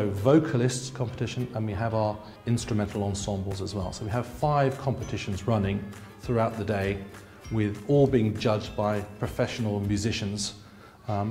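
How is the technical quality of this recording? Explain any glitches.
Two brief glitches break the recording's continuity. A dropped buffer (overrun) occurs at 3.52 s and again at 9.53 s. Each time the sound jumps forward with no gap, losing only a few milliseconds. The likely cause is that the recording software failed to collect its samples before the hardware overwrote them, so the audio on either side is joined directly.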